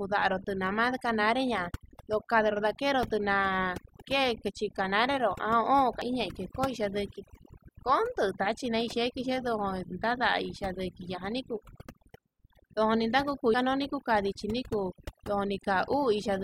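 Overdone noise removal runs through the whole speech recording. The suppressor was set too aggressively, driving individual frequency bands down whenever they sat near its noise estimate. Low-level parts of the voice were removed with them, leaving near-silent gaps with twinkling specks.

Damaged data in a compressed stream produces a brief blip at 6.02 s and again at 13.54 s, just before "kuu kandichi". At each point, corrupted bytes made the decoder misread frames and lose sync until it located the next valid frame header.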